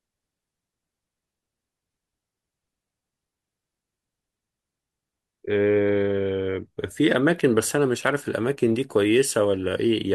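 No technical faults can be heard anywhere in this speech recording. Nothing interrupts or alters the sound at any moment.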